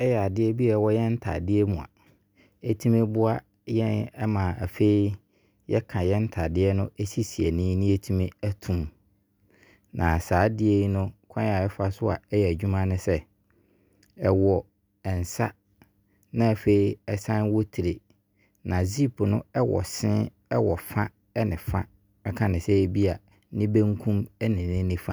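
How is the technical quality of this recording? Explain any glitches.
No technical glitches can be heard anywhere in this recording.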